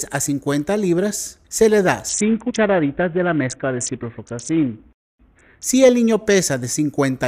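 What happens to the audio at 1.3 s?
Nothing goes wrong at 1.3 s; the audio plays through that moment cleanly, with no dropout, click or other fault.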